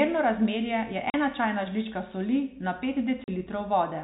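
Speech over a G.711 telephone line, band-limited to 4 kHz. It has packet loss filled with silence: hard-edged 40 ms gaps at 1.10–1.14 s, after "razmerje je", and 3.24–3.28 s, after "žlička soli na pet". Each gap's length fits two lost 20 ms packets.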